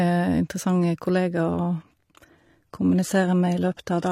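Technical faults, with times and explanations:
1.53 s to the end: adaptive stream at a lower bitrate. The connection slowed and the player switched abruptly, with no gap, to a much leaner encoding. The speech loses everything above 14.9 kHz, its treble turns synthetic and artefacts rise, which fits HE-AAC near 20 kbit/s replacing 96 kbit/s AAC.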